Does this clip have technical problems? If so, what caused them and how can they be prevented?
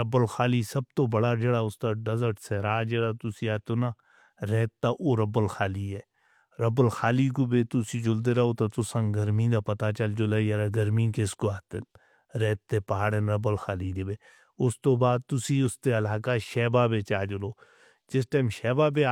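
No, this speech clip has no audible technical faults. With nothing to trace back to a cause, no preventive step is needed here.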